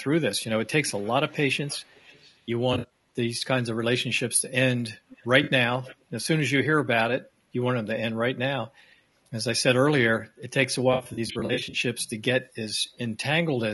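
The whole speech clip sounds rough and grainy, with a dulled top end, likely low-delay AAC compression (AAC-ELD) at around 32 kbps. From 0.87 to 1.11 s, 1.29 to 2.37 s, 5.09 to 5.27 s and 5.84 to 5.96 s a faint copy of the voice trails 400 ms behind. That's an echo leak, likely a far-end canceller letting loudspeaker pickup through. AAC frame loss with concealment smears things at 2.73 to 2.90 s and 5.43 to 5.49 s. It comes back worse from 10.93 to 11.79 s, where about 400 ms of dropouts are scattered over 800 ms, each patched with noisy, phasey fill.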